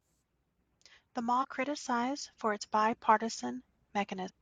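Damaged data in a compressed stream hits this speech at 1.39–1.45 s, just before "criticised for", and again at 4.25–4.31 s: corrupted bytes make the decoder misread frames and lose sync, producing brief glitches.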